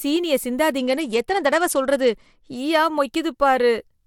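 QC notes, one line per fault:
0.78–2.57 s, Bluetooth SBC bit pool drop: treble dulls and gritty noise rises. Starved sub-bands lose detail, consistent with bit pool falling to 12, near 88 kbps.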